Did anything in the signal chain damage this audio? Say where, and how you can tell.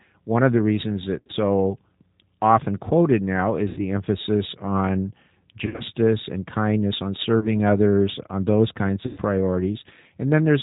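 Yes. At the codec stage, G.729 coding at 8 kbit/s rebuilds the speech from a filter and pulses, so it sounds rough, synthetic and cut off above 4 kHz throughout.

At the network stage, VoIP packet loss concealed by the speech codec occurs at 1.19–1.32, 3.68–3.80, 5.66–5.83, 7.39–7.49 and 9.06–9.19 s. The decoder extrapolates fading sound, and the speech stays weak just after each gap.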